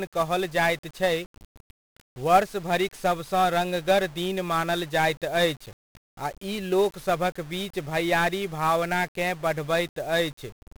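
Speech carrying heavy 1-bit DFPWM compression from start to finish: one bit per sample steers the signal, giving fuzzy crackle, hiss over treble, and a spectrogram flooded with broadband noise, consistent with roughly 48 kbps.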